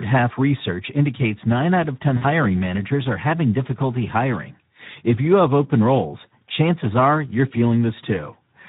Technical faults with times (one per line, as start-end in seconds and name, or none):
0.00-8.68 Speex codec
2.17-2.24 VoIP packet loss concealed by the speech codec